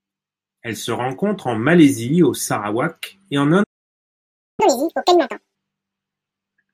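At 3.63 s the speech cuts out mid-flow and the output falls silent for about 0.95 s, resuming at 4.60 s. This playback stall was likely caused by the player running short of buffered data, or by its audio thread being blocked, leaving nothing to send to the output.

From 4.60 s to 5.55 s the speech runs at double speed, with pitch raised by roughly ten semitones. This catch-up at higher speed is the player resampling its backlog faster to recover the time lost in the stall.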